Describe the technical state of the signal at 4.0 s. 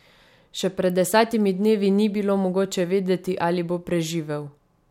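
The audio at 4.0 s is intact, with no audible fault in the signal at that moment.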